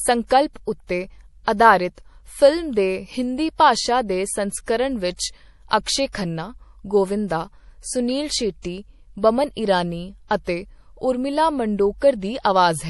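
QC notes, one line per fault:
Throughout: MP3 compression, likely the cause of what is heard here. The speech has nothing above 11.5 kHz, so the top end sounds dull and cut off. Under that ceiling the damage is plainly audible. Quiet detail flickers in and out from moment to moment, giving a watery, swirling texture. S sounds turn metallic and chirpy, and sharp onsets smear. This points to an encoder short of bits, which fits a low bitrate near 48 kbps.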